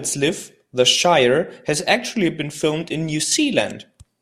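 From 3.23 to 3.32 s the speech abruptly falls about 6 dB without going silent, likely one channel drops out briefly, unlike a full dropout's total silence.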